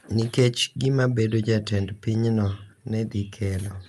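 No technical faults are audible in this speech.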